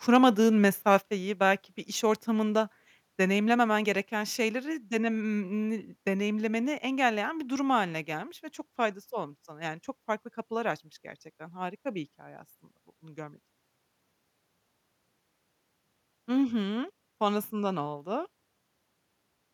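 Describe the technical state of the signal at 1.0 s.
Around 1.0 s, the microphone input was likely set too hot, causing microphone overload from 0.91 to 0.95 s. Peaks ran about 1 dB past the converter's limit and a small fraction of samples had their tops sheared off, giving a brief harsh crackle. At 1.02 s, just before "belki bir iş ortamında", the software likely reacted by stepping the microphone volume down about 4 dB in one jump, so voice and background suddenly drop in level together.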